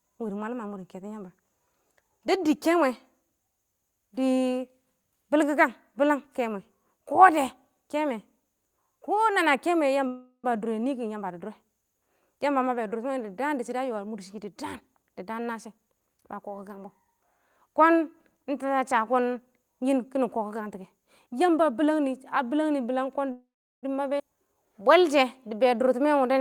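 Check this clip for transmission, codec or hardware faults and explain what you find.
The speech has four kinds of transmission fault, all typical of a call carried over a jittery packet network.

Call audio freeze, at 10.07–10.51 s and 23.32–23.85 s: the sound stalls into a fading buzz or hiss, then about 90 ms and about 370 ms of silence, before resuming where it stopped. Packets were likely delayed and the jitter buffer ran dry, inserting about 0.36 s and 0.51 s without losing anything.

Jitter buffer speed-up, at 13.68–16.45 s and 20.92–22.00 s: the speech sounds hurried at the same pitch, running at 108% and then 109%. The buffer held excess audio, so the receiver trimmed short pitch-period slices, roughly 0.2 s and 0.1 s in total.

Skip ahead, at 24.19–24.21 s: playback jumps forward almost seamlessly, with roughly 0.2 s of speech gone and the two sides joined nearly directly. Audio was discarded while later audio was already waiting in the buffer.

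Jitter buffer slow-down, at 24.36–24.56 s: the speech drags briefly at 85% speed, at unchanged pitch. The buffer was running low or had just raised its target delay, so the receiver repeated pitch periods, adding 36 ms to rebuild its reserve.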